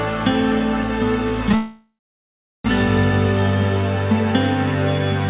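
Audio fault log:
1.55 to 2.67 s, call audio freeze: packets were likely held back in transit, so the jitter buffer ran dry and the receiver stretched the last sound into a fading buzz or hiss that sinks into about 0.73 s of silence before the stream resumes. The audio picks up where it stopped, with nothing missing, so the whole 1.09 s pause is inserted and everything after it arrives that much later, still capped near 4 kHz by the telephone-band codec.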